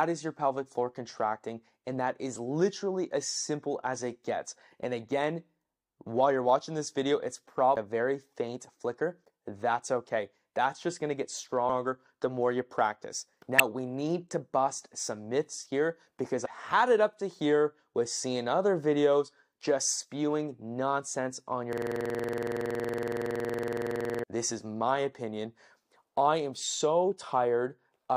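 Damaged data in a compressed stream makes the decoder lose sync and skip ahead, leaving brief glitches at 7.76, 11.68 and 13.59 s, and at 16.44–16.46 s. A system hang loop from 21.73 to 24.24 s, with the driver frozen while the hardware recycled one buffer, repeats a 46 ms slice at 21.5 Hz, which fits a 2048-sample buffer.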